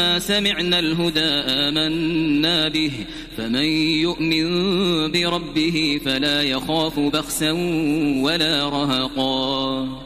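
No technical faults can be heard anywhere in the clip, so there is nothing to describe in time order.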